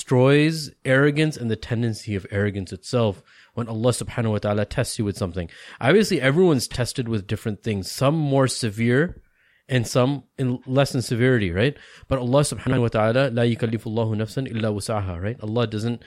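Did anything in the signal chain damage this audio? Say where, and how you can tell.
Yes. Frames out of order at the network/codec stage garble the speech twice, from 6.71 to 6.77 s just before "with different things some" and from 12.67 to 12.78 s just before "wa ta'ala la". Two adjacent blocks of 26.1 ms in the first and 52.2 ms in the second were decoded in swapped order, which points to single-frame and two-frame reordering. Each stretch flutters. A spectrogram shows broken harmonics at each seam, with no gap in time.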